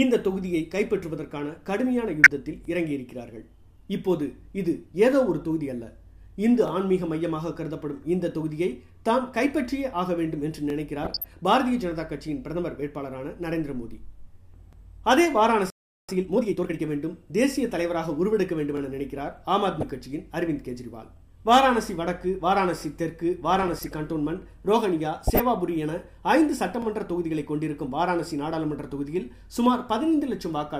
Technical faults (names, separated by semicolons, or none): DAB burbling; overlapping chunks; playback stall; time-compressed catch-up